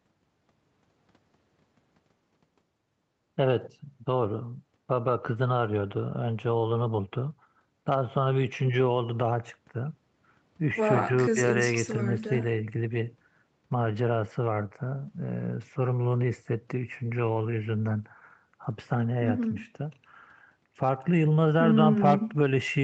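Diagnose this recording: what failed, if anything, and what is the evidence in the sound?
Nothing failed; the speech shows no audible faults.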